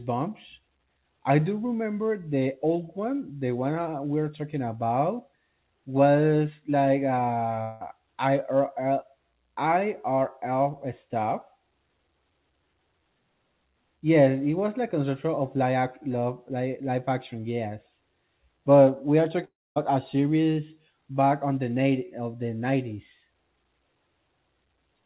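Long network dropouts at 7.62 to 7.82 s and 19.44 to 19.78 s: the sound smears into a fading buzz, the second one thinning to silence, before resuming with roughly 0.18 s and 0.32 s missing. This is likely packets lost over the narrowband call line, cut off above 4 kHz.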